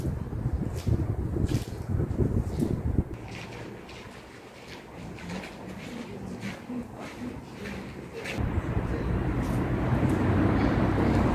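No technical faults can be heard anywhere in this audio.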